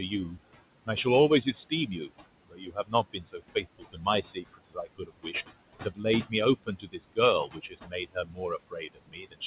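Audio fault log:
throughout: noise suppressor artifacts. The room noise sits about 14 dB below the sound and is pushed down by about 20 dB. The suppressor judges each band frame by frame, so the leftover noise keeps shifting.
0.10–0.37 s, 1.45–2.11 s, 2.45–5.48 s, 5.84–9.46 s: speech cut by the noise suppressor. Quiet parts of the speech are treated as noise and turned down. The deepest drops are about 7, 17, 21 and 22 dB. The first two runs lose only about a tenth of a second. The third loses about a second and a half. Those parts sound swallowed and faint.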